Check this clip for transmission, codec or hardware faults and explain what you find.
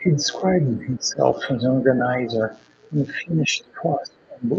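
Two kinds of fault show up, both pointing to echo cancellation struggling while both ends of the call talk at once. The speech itself comes through a call codec with an 8 kHz audio bandwidth.

Speech suppressed in double talk appears at 0.00–0.21 s, 0.76–1.21 s, 2.26–2.54 s and 3.19–4.51 s. The canceller likely mistook the talker for loudspeaker echo and attenuated everything. The talker's level sags, by about 5 dB at first, about 10 dB mid-clip, and about 20 dB in the long final stretch.

The other side's voice is leaking through at 0.20–0.24 s and 3.68–3.73 s. Loudspeaker sound was likely not fully removed from the microphone signal. Brief scraps of a second voice surface, the first at about 15 dB below the speech and the second at about 40 dB down.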